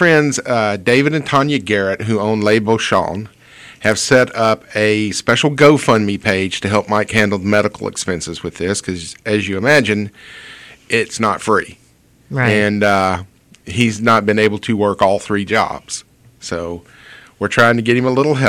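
From the first moment to the end, the loudest peaks carry a harsh crackle, a gritty edge that bursts out each time the level climbs. This is hard clipping. The signal is driven about 10 dB beyond what one stage in the chain can pass, so its peaks are sliced flat. Only a small share of samples, around half a percent, actually hit the ceiling, but those squared-off tops spray harmonics high into the spectrum, producing the crackle.

From about 0.11 s through 18.45 s there is a soft, even rattle, a stream of faint ticks about every 50 ms, roughly twenty a second and hundreds in total. These are clock slip clicks, most audible on loud or sustained sound and disappearing in quiet passages. Their likely cause is two devices each running on its own clock with no sync between them, drifting apart on the order of 500 parts per million. Each time the offset reaches a full sample, one sample is dropped or repeated, leaving a tiny step in the waveform.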